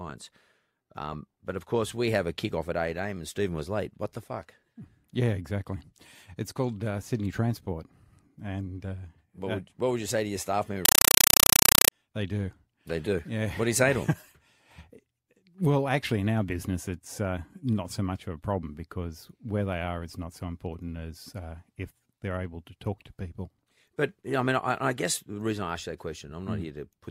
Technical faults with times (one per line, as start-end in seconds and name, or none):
10.85-11.92 compressed stream played as audio